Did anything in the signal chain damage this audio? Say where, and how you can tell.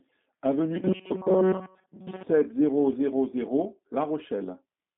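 Yes, and it's the G.729 codec stage, all the way through the clip. The speech has a slightly rough, synthetic edge, and the band stops hard at about 3.7 kHz, with the useful line band running from about 150 Hz to 3.6 kHz. That fits an 8 kbit/s G.729A link. It doesn't send the waveform. It sends filter, pitch and pulse parameters every 10 ms, so the rebuilt speech loses its natural fine detail.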